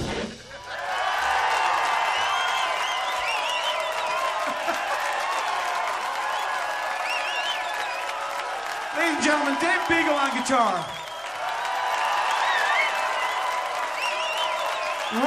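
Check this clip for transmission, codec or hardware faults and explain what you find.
Nothing in the clip points to a transmission, codec or hardware fault. There is nothing here that needs explaining.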